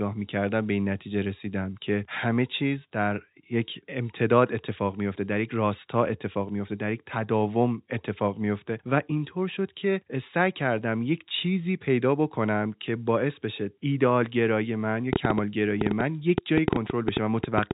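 A train of clicks runs from 15.13 s to 17.72 s at the end of this telephone-band speech recording, which carries nothing above about 3.8 kHz. Some twenty similar pulses arrive at an uneven pace averaging about 7.4 per second, peaking around 20 dB above the speech and ticking through pauses as well. Repeated pulses of the same shape at an erratic rate most likely come from electrical interference from nearby equipment or a faulty connection or power supply.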